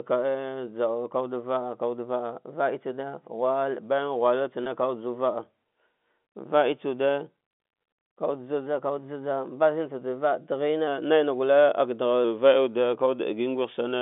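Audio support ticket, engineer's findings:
Brief buzzy hold at 4.64–4.66 s, a slightly sustained, frozen tone where roughly 20 ms of audio went missing, which fits a single lost 20 ms packet. Component: receiver jitter buffer and loss concealment. Mechanism: packet loss with pitch repetition. The decoder looped the last pitch period to fill the hole, then faded back into live audio. The gap was short, so there is no dropout to silence.

Playback sags from 12.24 s to the end of the clip, about 6.07% slower and 108 cents flat, roughly a semitone down, and it does not recover before the audio ends. Speed and pitch drop together, so this is a rate change rather than a pitch effect. Component: clock-sync resampler. Mechanism: likely a drift correction step, where the sync logic shifted the playback rate in one jump to rebalance its buffer. The G.711 telephone coding otherwise works normally, with its narrow 200 Hz to 3.5 kHz band.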